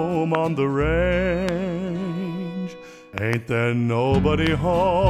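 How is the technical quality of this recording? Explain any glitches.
The recording is marred by loud pops at 0.35 to 0.37 s, 1.49 to 1.51 s, 4.47 to 4.49 s, and a double pop from 3.18 to 3.35 s. Each likely comes from a voltage pulse, such as a plug, switch or static discharge, added to the signal. At roughly 15 dB above the audio, it lands as a sharp thump with body, unlike a thin digital click, while the sound continues underneath rather than dropping out.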